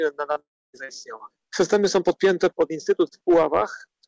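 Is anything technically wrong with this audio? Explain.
Yes, two faults occur close together near the start.

From 0.34 to 0.38 s the sound briefly smears, stretching for an instant instead of moving on cleanly. This is short concealed packet loss. About 20 ms of audio reached the decoder too late, so the receiver filled the hole by extending the preceding sound, from its pitch where it was voiced and as shaped noise where it was not, then blended back into the real signal.

From 0.40 to 0.75 s the sound carries on as a buzz or hiss that fades, then gives way to about 270 ms of silence before the audio returns further along, with the missing stretch simply gone. The likely cause is a long network dropout: roughly a third of a second of audio never arrived. Concealment covered the start of the gap with a decaying continuation, and once that ran out, nothing was left to play. Throughout, the G.722 call path leaves nothing above 8 kHz.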